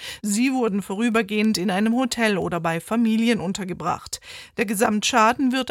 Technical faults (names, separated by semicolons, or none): word clock ticks